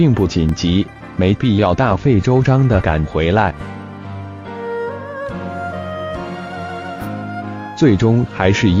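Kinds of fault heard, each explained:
Overlap between stream segments: two neighbouring stream segments claim the same few milliseconds, and the player discards that stretch, so about 5 ms of real audio is lost and the waveform jumps across the gap. Here it gives a tiny click or skip at 0.49 s and again at 4.48 s, spaced to match 4-second segments. Unlike a dropout, nothing goes silent; the sound simply lurches forward at each boundary.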